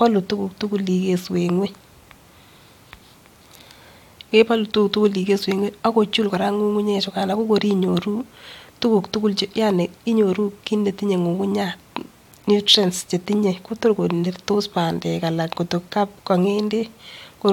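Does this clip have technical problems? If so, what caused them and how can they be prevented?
No, nothing technical goes wrong anywhere in this speech recording, so there's no problem to trace back or guard against.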